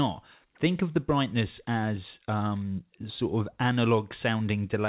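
There are no technical faults to describe in this speech, which comes over a call path with nothing above 4 kHz.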